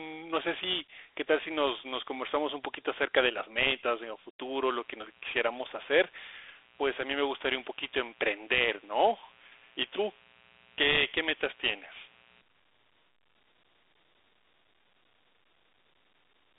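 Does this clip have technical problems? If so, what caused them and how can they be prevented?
Yes. The whole clip carries Dialogic VOX ADPCM damage: the speech sits in a narrow phone band from 300 Hz to about 3.6 kHz with nothing above 3.8 kHz, and there's a plainly audible gritty hiss riding on it. That's the 4-bit OKI-style ADPCM coder roughly guessing each sample step, which fits a 32 kbps stream at 8,000 samples a second. To avoid it, record or export the source as 16-bit linear PCM and only convert to VOX at the final playback stage, if at all.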